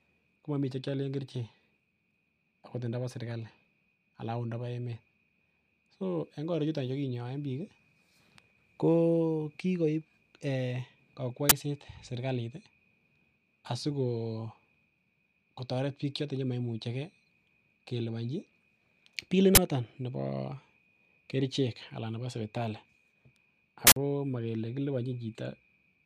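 At 11.49 to 11.52 s and again at 19.55 to 19.57 s, an uninitialised buffer breaks into the speech as a loud burst of digital noise about 23 ms long, which fits a 1024-sample block. A third, longer burst runs from 23.87 to 23.96 s, about 93 ms, consistent with a 4096-sample block. In each case the block was played out before any audio had been written into it, so leftover memory contents were heard as samples.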